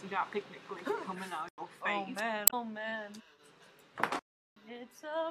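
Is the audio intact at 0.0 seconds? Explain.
Yes, the audio is intact at 0.0 seconds, with no fault present at that moment.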